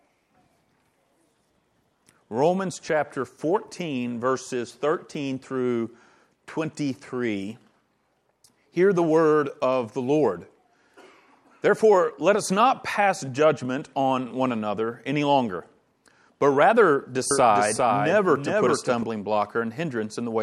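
At 17.31 s a doubled audio track appears and runs until 19.03 s: a second, full-band copy of the sound trails the original by roughly 0.4 s, about 5 dB quieter, with no decay or room colour. It likely comes from the audio being captured again through a slower path. On a spectrogram, every feature repeats as a fainter duplicate shifted right by a fixed gap. The waveform shows the overlay starting and stopping abruptly.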